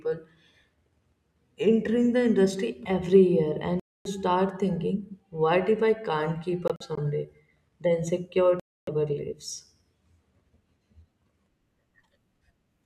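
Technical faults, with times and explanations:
3.80 to 4.07 s, Bluetooth dropout: Right after "the industry every year" the speech cuts to silence for about 256 ms, then resumes at "thinking what if I" with nothing in between. This is likely a run of wireless audio packets arriving too late to play, with the stream continuing as if it had played on.
6.68 to 6.99 s, Bluetooth dropout: After "if I can't keep" the sound stutters with brief holes instead of one gap, about 85 ms missing in total across roughly 0.3 s, the longest about 43 ms. The likely cause is scattered individual packets lost, each leaving its own gap.
8.60 to 8.89 s, Bluetooth dropout: A clean silent hole of about 277 ms cuts through the speech, and the sound comes back later, as if it had kept going during the gap. This likely points to a longer burst of consecutive packets missing their playback deadline.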